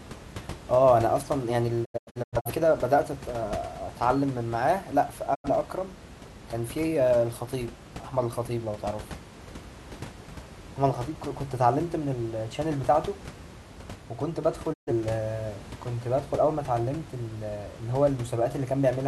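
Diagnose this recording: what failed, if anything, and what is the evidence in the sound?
Digital broadcast dropout in the reception and decoding stage. The speech cuts out at 1.84 to 2.50 s as a cluster of short holes spread over about 0.6 s, losing about 0.34 s in total with the longest gap about 85 ms. Single gaps follow at 5.34 to 5.49 s (about 85 ms) and 14.72 to 14.92 s (about 128 ms). Each edge fades over 20 ms. The gap lengths step in units of about 43 ms, which fits whole codec frames failing their checks and being muted by the receiver until good frames return.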